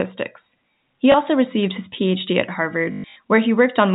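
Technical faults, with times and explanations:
1.12–1.14 s, packet loss with last packet repeated: a single 20 ms gap just before "also received his" is filled by replaying the previous packet, which sounds like a small blip.
2.92–3.16 s, packet loss with last packet repeated: about 180 ms is lost, scattered over 240 ms, with the longest run lasting 120 ms. The repeated segments buzz at about 50 Hz, which fits 20 ms packets. The result is a robotic stutter over the band-limited G.711 telephone sound.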